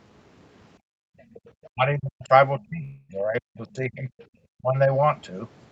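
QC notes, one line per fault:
0.78–1.43 s, background gated by the echo canceller: the room sound dips by up to about 39 dB for around half a second while the loudspeaker plays, as the canceller clamps the microphone.
1.19–1.39 s, 1.63–1.68 s and 4.18–4.25 s, other side's voice leaking through: faint scraps of a second voice, roughly 30 dB below the talker, likely loudspeaker echo the canceller failed to remove.
1.71–2.31 s, 2.58–4.09 s and 4.61–4.89 s, speech suppressed in double talk: the talker's speech drops by up to about 40 dB in the first two stretches and about 15 dB in the last. This is likely the canceller ducking everything while both sides speak.
2.83–3.11 s, long network dropout: about 260 ms of audio never arrived. The receiver stretched the last sound into a fading buzz for around a quarter second before the stream resumed, which points likely to lost packets.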